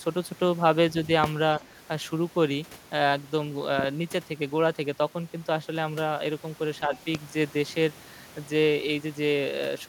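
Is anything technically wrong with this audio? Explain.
Yes. Speech suppressed in double talk appears twice: at 1.58 to 1.63 s and 6.87 to 7.0 s, the speech briefly sinks by a few decibels. The likely cause is an echo canceller that, with both sides talking, mistook the near talker for loudspeaker echo and turned it down.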